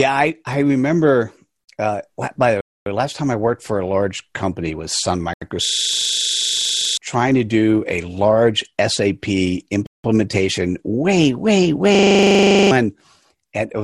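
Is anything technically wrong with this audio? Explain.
Yes, there are two kinds of trouble here. Three short drops to dead silence come at 2.61 s between "by the" and "way last time I" (0.25 s), at 5.34 s (80 ms), and at 9.87 s (0.18 s), with the speech picking up where it stopped. That's likely a Bluetooth stall, where the headphone buffer ran dry while delayed packets were resent.

There are also two system hang loops, one from 5.65 to 6.97 s just before "trying to do a", and one from 11.95 to 12.71 s right after "way way". Something froze while the sound hardware kept replaying the same 40 ms slice of its buffer, 33 times and then 19 times. You get a rattling 25 Hz stutter, and about a second and a half, then roughly 0.7 s, of speech goes missing.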